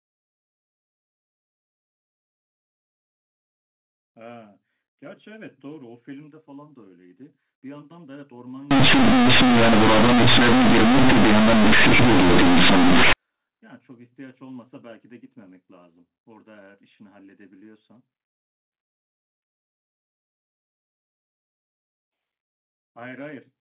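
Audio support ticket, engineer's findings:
Loud, harsh buzzing distortion with heavy noise in gaps, 8.71–13.13 s. Companded audio read as linear: mu-law G.711 bytes played as raw 8-bit samples, no expansion applied.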